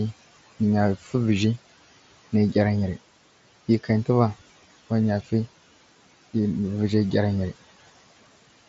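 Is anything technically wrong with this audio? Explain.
Yes, there are two problems from noise suppression. Throughout, noise suppressor artifacts: the suppressor pulls steady room noise down by about 16 dB frame by frame, so residual noise sinks between phrases and rises under speech. On a spectrogram the noise floor looks patchy and gated. From 0.97 to 1.14 s, speech is cut by the noise suppressor: it mistakes soft speech for noise and lowers it by up to about 10 dB, so that sound comes out swallowed. The waveform shows a brief dip there, and the spectrogram shows faded energy. Above 7.7 kHz the spectrogram is empty, which fits the mSBC Bluetooth headset link.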